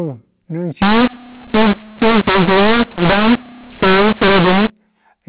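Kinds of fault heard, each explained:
mu-law and A-law mixed up: from 0.82 to 4.70 s the speech turns harsh and gritty because the A-law telephone samples are decoded with the mu-law curve. Loud and soft levels land in the wrong places, and the pauses fill with hiss.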